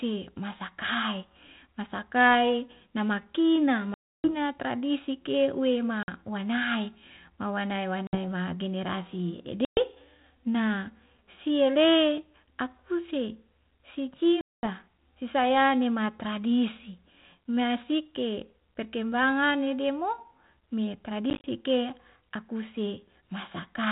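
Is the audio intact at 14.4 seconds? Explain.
No. Packet loss on an ADPCM call cuts a hard-edged silent hole from 14.41 to 14.68 s, about 220 ms, consistent with roughly twenty lost packets. Unlike a plain dropout, the decoder's adaptive predictor and step size lose step with the sender's, so sound resumes slightly distorted before settling.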